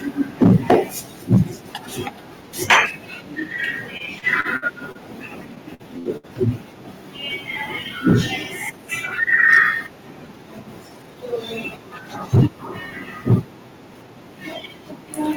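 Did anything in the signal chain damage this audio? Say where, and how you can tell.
Yes, four kinds of damage.

Microphone overload at the converter input: the loudest syllables get a harsh, crackly edge at 0.42–0.76 s, 1.32–1.41 s, 2.70–2.78 s, 9.53–9.63 s and 12.34–12.46 s. The peaks sound flattened because the signal is running past full scale by about 12, 5, 9, 3 and 8 dB. The worst spot is around 12.4 s, where a fair chunk of the waveform is sheared off. The likely cause is input gain set too hot, so the tops get chopped off at the ADC.

Microphone volume stepped down in call processing: right after the overload starts, everything drops by about 2 dB at 0.43 s and again at 12.36 s. The voice and the background fall together in a single step, with no fade. That's the signature of the call software likely spotting the clipping and pulling the device's input gain down in one go. Both steps land in the middle of a distorted peak, which is what you'd expect from that reaction.

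Repeated packet loss (robotic sound) on the network leg: from 3.97 to 4.98 s and from 5.55 to 6.26 s the sound turns choppy. The first stretch has six holes, the longest about 55 ms, and roughly a fifth of it is patched. The second has four holes up to 65 ms, and more than a quarter is concealed. Each gap gets filled by stretching the last bit of sound, and then the next gap arrives before things settle.

Jitter buffer speed-up at the receiver: between 13.95 and 14.13 s the audio suddenly runs at 118% speed, but the pitch stays put, so it sounds hurried rather than squeaky. The buffer had piled up more audio than it wanted, probably from delayed packets arriving in a bunch. To catch up, it cut out around 40 ms in small pitch-period slices one after another.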